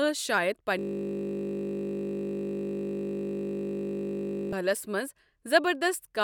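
From 0.79 s to 4.53 s a system hang loop takes over: the system froze while the hardware kept replaying one 20 ms buffer, producing a steady 50 Hz buzz. A spectrogram shows flat harmonic lines spaced 50 Hz apart, and the waveform repeats one identical 20 ms shape.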